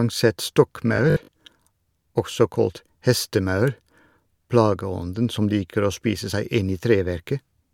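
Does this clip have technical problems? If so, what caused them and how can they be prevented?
Yes. From 0.96 to 1.36 s the speech collapses into a rigid metallic buzz at 50 Hz, robotic sound from repeated short buffers, likely from audio arriving too slowly so a 20 ms block is replayed, covering roughly two fifths of that span. Preventing it calls for a larger jitter buffer and steadier CPU scheduling for the audio thread.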